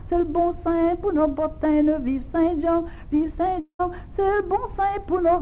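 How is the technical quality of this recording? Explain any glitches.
The recording has one glitch. It is carried over a narrowband call path with nothing above 4 kHz, which fits a G.711 telephone codec at 64 kbps.

From 3.6 s to 3.81 s there is a long network dropout, likely caused by a run of lost packets. About 0.2 s of audio never arrives. The receiver's concealment stretches the last received sound into a fading buzz for most of that span and then falls to near-silence for about 0.1 s. The sound resumes after the gap, and the lost portion is not recovered.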